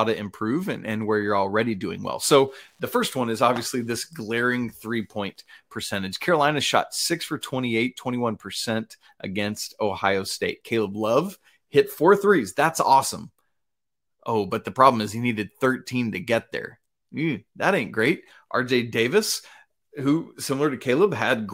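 Wi-Fi interference runs from 1.95 to 5.63 s, just after "and where you're already". The audio circuit rectifies a nearby Wi-Fi radio's beacon, sent every 102.4 ms, producing a steady tick about ten times a second, faint, roughly 50 dB below the speech.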